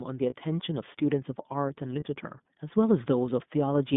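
Throughout, the speech passes through the iLBC codec. Nothing above 3.6 kHz or below 150 Hz survives, and the voice sounds rough and synthetic. At 0.30 s and again at 2.0 s, lost iLBC frames leave short buzzy held sounds, each fitting one missing 20 ms frame. The voice recovers almost instantly.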